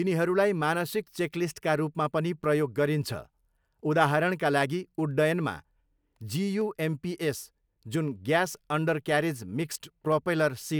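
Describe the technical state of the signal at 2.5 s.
Periodic USB or driver dropouts run through 2.5 s, part of a pattern spanning 0.11 s to 10.62 s. At a steady 0.5 s interval, something stalls the USB path or audio driver, and a tiny fraction of a millisecond of the speech is skipped outright rather than replaced by silence. Each skip leaves a small discontinuity in the waveform, heard as a regular tick, about twenty in all, audible only while sound is present.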